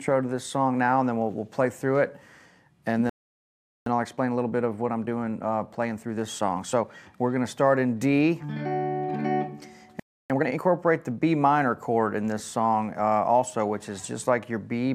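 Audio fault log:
3.09–3.86 s, playback stall: the sound cuts to silence for about 0.77 s mid-flow, likely because the player ran out of buffered data or its thread was blocked.
3.86–6.86 s, time-compressed catch-up: audio runs 1.15 times fast at unchanged pitch as small pieces are cut and cross-faded to clear the backlog.
10.00–10.30 s, playback stall: output drops out for about 0.3 s, likely from data starvation or a blocked playback thread, then resumes.
10.30–10.60 s, time-compressed catch-up: a brief burst at double speed with pitch held, as the player splices out segments to recover lost time, sounding hurried.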